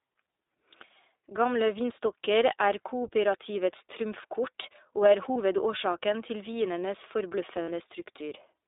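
From start to end the speech passes through the iLBC codec, a narrowband VoIP coder. The line is confined to roughly 300 Hz to 3.7 kHz, so the sound is thin, without low body or any air above 4 kHz. The codec damage is plainly audible as a rough, slightly synthetic grain, the kind that fits iLBC's 15.2 kbps mode with 20 ms frames. Unlike wideband codec smearing, the whole clip is both band-limited and grainy.

At 5.34 to 5.37 s, right after "og er", comes the first case of lost iLBC frames. About 40 ms is missing, which points to two dropped frames. The decoder fills the gap by repeating the last pitch cycle mixed with noise, heard as a short held, buzzy vowel rather than silence or a click. A second, longer loss follows at 7.62 to 7.70 s, after "til vinenes". This 60 ms gap, likely three frames, drones a little longer. In both cases the speech is clean again immediately, because each iLBC frame decodes independently. 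This sets it apart from codecs whose errors spread into the frames that follow.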